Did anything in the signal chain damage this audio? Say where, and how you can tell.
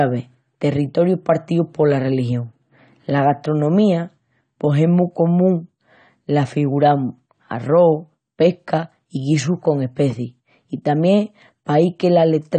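Yes. The damage is at the codec stage and runs through the whole speech clip: nothing above 9 kHz, so the speech sounds dull, with a fizzy, warbling edge on sibilants and held vowels. This is likely AAC compression, AAC-LC at a rate that fits about 32 kbps, quantising so coarsely that it drops the top band. A spectrogram shows a hard ceiling at 9 kHz with patchy holes below it. The waveform looks normal.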